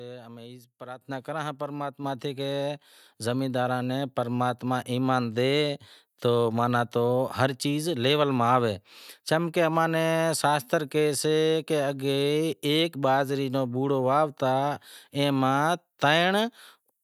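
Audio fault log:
1.02 s microphone volume stepped up: software raised the input gain about 9 dB in a single step, so speech and background noise jump louder together.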